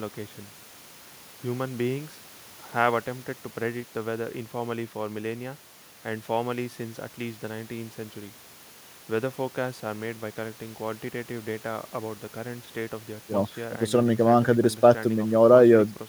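No audible faults anywhere in the speech recording; nothing to flag.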